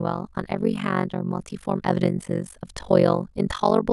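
Overlap-add ripple runs throughout: badly overlapped frames swing the level by about 60 dB around 50 times a second, giving the speech a harsh, robotic flutter.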